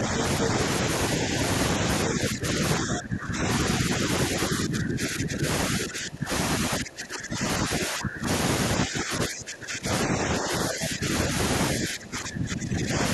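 From the start to 0.55 s the talker's speech dips slightly and, at 0.45 s, a short scrap of the other side's voice leaks through, only a little quieter than the talker. That is the other side's voice leaking through, likely loudspeaker echo the echo canceller left behind. The talker's speech then dips again, by up to about 20 dB, at 1.79–3.47, 3.82–6.31, 6.7–8.27, 8.84–11.34 and 11.75–12.99 s. This is speech suppressed in double talk: during overlapping talk the canceller likely turned the talker down along with the echo.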